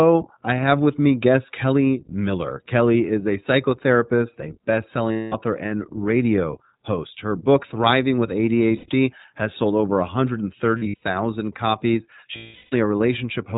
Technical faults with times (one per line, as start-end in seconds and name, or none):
0.00-13.57 iLBC codec
5.12-5.34 lost iLBC frames
8.76-8.89 lost iLBC frames
10.78-11.01 lost iLBC frames
12.36-12.74 lost iLBC frames